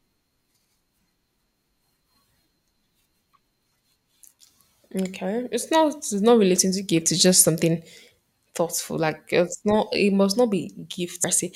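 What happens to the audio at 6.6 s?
Damaged data in the compressed stream at 6.56 s knocks the decoder out of sync, leaving a brief glitch between "it's not it's not" and "to gift".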